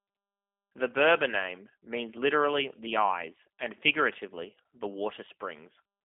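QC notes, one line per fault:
Throughout, G.729 codec: rough, slightly synthetic speech with nothing above 3.6 kHz, from a low-rate coder rebuilding each frame from a filter and pulses, consistent with 8 kbit/s.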